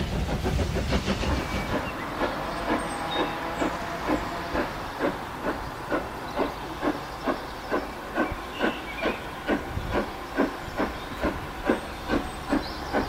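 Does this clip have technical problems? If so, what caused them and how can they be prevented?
No technical faults are audible.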